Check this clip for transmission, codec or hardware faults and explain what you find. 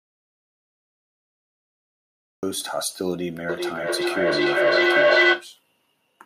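Two faults are present in this speech recording: a dropout to silence at the very start and a feedback echo between two devices later on.

The audio dropout to silence is already under way when the clip begins and lasts until 2.43 s. That stretch is silent, with no room tone or noise floor, and the speech simply begins mid-flow when the signal returns. The likely cause is the input being lost, for example through a disconnected device, failed link or stray mute, while the recorder kept writing empty samples. Whatever was spoken during that gap is unrecoverable.

The feedback echo between two devices runs from 3.49 s to 5.52 s. Each phrase returns at a fixed interval of roughly 0.4 s, sounding progressively thinner and more metallic. Two devices on the same call share the room, so one plays back the other's microphone feed, which that microphone captures again. Neither echo canceller removes the other device's playback. 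The loop gain is high enough that the repeats build rather than decay, peaking at about 10 dB above the direct speech.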